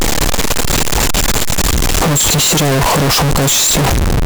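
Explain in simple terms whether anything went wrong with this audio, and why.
The whole clip blasts out harsh, with background noise as loud as the speech. That's float read as integer: likely 32-bit float samples decoded as plain integers.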